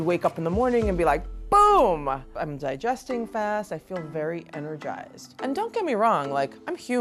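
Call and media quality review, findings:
No faults found. Nothing in the audio calls for a ticket entry.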